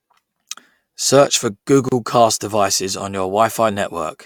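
At 1.89 s there's a gap at a join of encoded pieces: the speech drops out for about 33 ms and then picks up with "cast devices on". Two separately encoded chunks were butted together untrimmed, so encoder delay and end padding leave a hole whose edges the codec smears.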